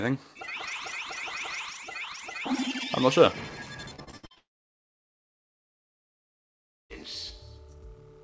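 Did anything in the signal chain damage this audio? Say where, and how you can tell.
Yes, at the network stage. Repeated packet loss, with its robotic sound, runs from 3.96 to 4.38 s. Six short holes break up that stretch, the longest about 63 ms, and roughly 43% of the span is concealment rather than real audio. The receiver bridges each gap by extending the last fragment, so the sound turns choppy, with pieces missing. The band stops at 8 kHz, which fits the G.722 call codec.

A long network dropout follows straight on, from 4.38 to 6.92 s, and is the likely cause of what comes next. For about 2.5 s no new audio arrives. The concealed tail buzzes briefly, then collapses into near silence for almost the whole stretch. The audio resumes at 6.92 s, and whatever was sent during the gap never returns.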